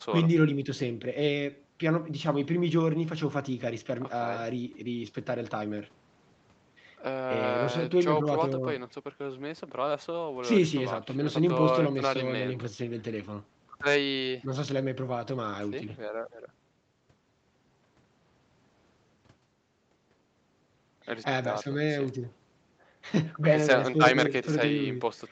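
Speech heard through a call's microphone processing and WebRTC call path, band-limited to 8 kHz as that route normally leaves it, with no faults.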